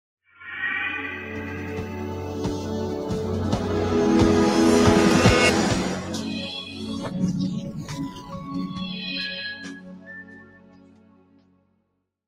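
A speech-style noise suppressor has been left running on this audio. It treats steady tones and ambience as noise. Level swings by around 20 dB as attacks pass and sustained parts sink. The result pumps and thins throughout. The sound is cut by the noise suppressor most in three stretches: 6.54 to 7.16 s, dropping about 8 dB; 7.6 to 9.38 s, about 12 dB; and 9.54 to 12.03 s, about 17 dB. Held and decaying sound fades early there. The cuts deepen with each stretch.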